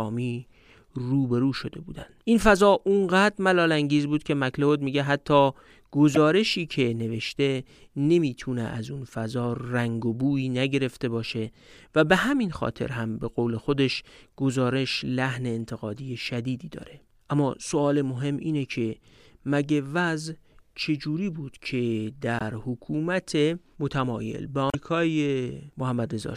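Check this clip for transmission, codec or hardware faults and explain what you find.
There's one problem here: damaged data in a compressed stream, hitting three times, at 6.14 to 6.17 s, 22.39 to 22.42 s and 24.67 to 24.75 s. Each is a brief blip cutting into the speech, the last one over twice as long as the others. Some of the compressed frames carry bad bytes, so the decoder misreads them, loses its place in the stream and spits out garbage until it locks onto the next valid frame header.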